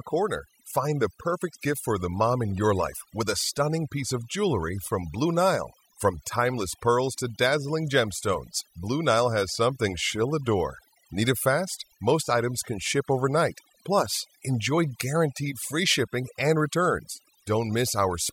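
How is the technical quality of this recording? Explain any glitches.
The recording suffers from overdone noise removal, present throughout the speech. A noise reduction stage was pushed far too hard. It cuts any frequency band sitting near its estimate of the noise floor down to almost nothing, and the quieter parts of the voice get swept away with the noise. The gaps between phrases fall to near silence flecked with twinkling, chirpy specks.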